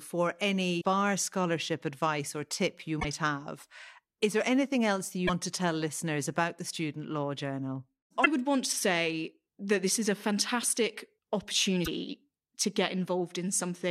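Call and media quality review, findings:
Damaged data in a compressed stream: five short glitches, each 56–84 ms, at 0.77–0.85 s (before "scholarship advice or tip"), 2.97–3.05 s, 5.24–5.30 s (between "there anything else that" and "to tell listeners about"), 8.22–8.27 s and 11.82–11.88 s. Probable component: decoder input. Corrupt frames are misdecoded, sync is lost, and the decoder resumes at the next valid header.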